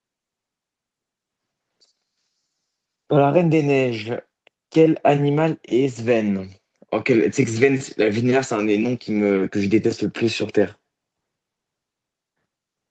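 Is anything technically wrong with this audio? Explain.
No, the speech has passed through a call's microphone processing, which rolls off the lowest bass and leaves nothing above 8 kHz, and that is the normal behaviour of such a path rather than a fault.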